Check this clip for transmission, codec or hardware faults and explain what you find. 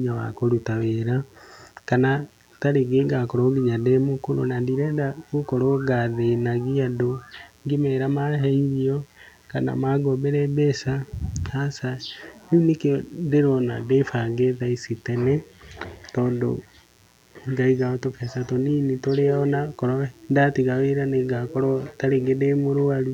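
There's one fault here: a mains buzz running under the speech for the whole clip. It's 60 Hz interference with sharp spikes, probably from a dimmer, rectifier or poor shielding, stacking harmonics into the kilohertz range. It comes through as a steady, raspy buzz, sitting well below the speech.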